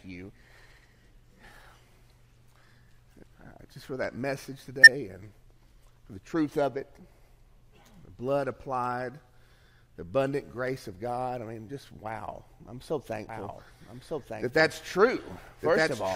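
At 4.83 to 4.88 s and again at 11.68 s, compressed frames are skipped: the sound jumps ahead by about 20 ms, because the decoder never received or rejected those frames.

From 13.29 s to the end, a doubled audio track sets in abruptly. A full-band copy about 5 dB quieter trails by roughly one second, likely from a second, slower capture path. Unlike echo or reverberation, the copy has no decay or room colouring.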